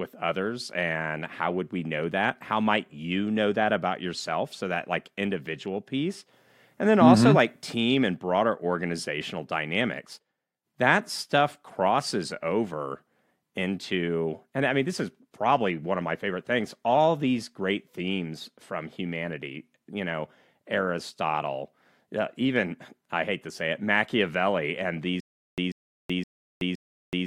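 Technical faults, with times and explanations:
25.20 s to end, stutter with silent gaps: a 141 ms burst of speech repeats four times, every 517 ms, with 376 ms of dead silence between; likely a stalled stream replaying its last fragment.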